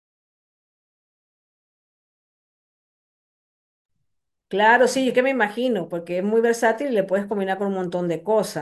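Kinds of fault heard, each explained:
Nothing in this speech recording stands out as a technical fault; it just runs along without any audible glitch or hiccup.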